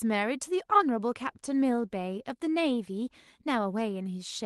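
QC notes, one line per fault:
Nothing stood out on listening to this speech clip.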